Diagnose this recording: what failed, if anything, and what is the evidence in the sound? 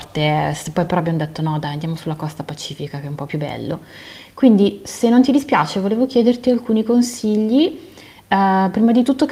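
Nothing failed in this recording, and the sound gives no evidence of any fault.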